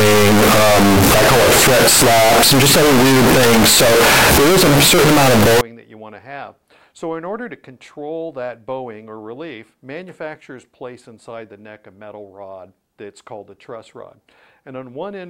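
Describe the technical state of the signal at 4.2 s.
At 4.2 s the signal is in a float-read-as-integer fault running from 0.0 to 5.61 s. It is a harsh, near-square wave at an almost fixed, high level. It fits 32-bit float samples likely decoded as 32-bit integers.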